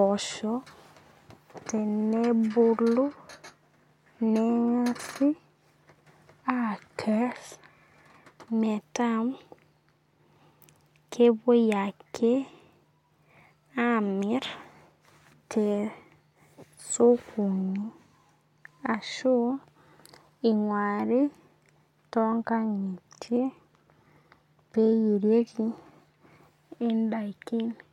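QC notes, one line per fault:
No audible faults were found in this speech recording.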